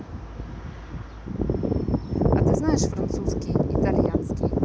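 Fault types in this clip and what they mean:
No faults detected in this clip.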